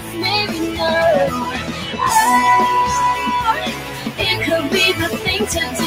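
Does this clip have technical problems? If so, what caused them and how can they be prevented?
Yes. A noise suppressor built for speech was left running on this material. It treats sustained and ambient parts of the sound as noise and pulls them down, so the level keeps shifting by around 10 dB as the processor changes its mind. Attacks come through while held parts and tails sink, which causes a fluttering, pumping thinness. A compressor would duck everything after loud hits; this gain follows how noise-like the sound is. Disable speech noise suppression or use a music mode for this kind of source.

The sound cut by the noise suppressor is clearest in four stretches: 0.00–0.19 s (about 7 dB down), 0.48–0.79 s (about 6 dB), 1.49–1.99 s (about 6 dB) and 3.71–4.19 s (about 7 dB). In each, steady or decaying content is taken for noise and turned down, so tails shorten and the sound thins. 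This isn't a dropout, because the audio dims rather than vanishing, and the loss falls on the sustained parts rather than cutting everything. Turning the suppressor off prevents these dips.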